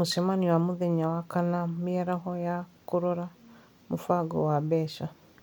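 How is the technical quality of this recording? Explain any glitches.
The technical quality of this recording is sound, with no glitches to explain.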